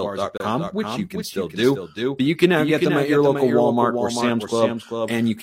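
From the start the speech carries a doubled audio track: a second, full-band copy trails the original by roughly 0.4 s at about 5 dB lower, most likely captured again through a slower path. It sounds like a dry, hard echo with no room decay or colour, each syllable restated a beat late. On a spectrogram every harmonic stack and onset reappears, faithfully and slightly fainter, shifted right by that fixed interval. In the waveform the envelope shows a smeared second outline.

At 0.38 s, just before "which you can still", a gap between stream segments drops in 26 ms of silence, running to 0.40 s. Two segments' time stamps do not meet, and the player pads the hole with nothing, so no audio is lost but the timeline stretches. It is heard as a tiny hard dropout. The waveform shows a flat-line notch with square edges, and the spectrogram a clean vertical blank strip across all frequencies.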